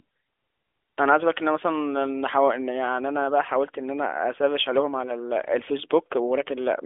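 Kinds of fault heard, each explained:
No faults can be heard in this speech recording.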